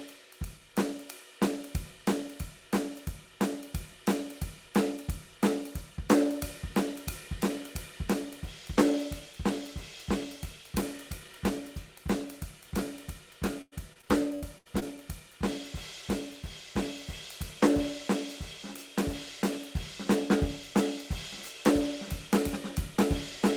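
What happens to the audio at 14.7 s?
At 14.7 s the music is inside a stretch of repeated packet loss (robotic sound), running from 13.61 to 14.83 s. Seven packet gaps, the longest 101 ms, were patched by extending the preceding sound, so the music turns choppy, with pieces missing.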